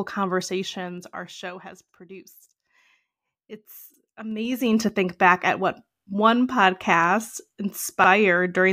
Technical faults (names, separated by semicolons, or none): zipper noise; overlapping chunks